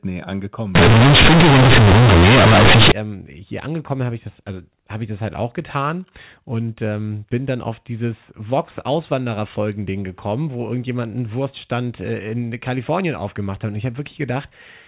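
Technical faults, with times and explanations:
0.75–2.92 s, companded audio read as linear: mu-law bytes play as linear 8-bit samples, unexpanded. Each sign change swings the output over about half its range, so quiet sounds match loud ones. This gives very loud, buzzy distortion and strong noise in pauses, before "ähm hier angekommen bin".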